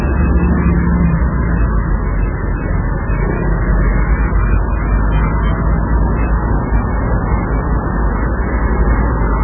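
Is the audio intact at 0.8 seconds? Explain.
No. At 0.8 seconds, as throughout the clip, the sound carries heavy damage that points to MP3 compression, likely at a very starved bitrate near 8 kbps. Nothing remains above about 3.1 kHz, and weak frequency lines drop in and out between frames, giving a watery, swirling texture with smeared attacks. A plain low-pass filter would dull the top end just as much, but it would leave the remaining band steady rather than bubbling and flickering.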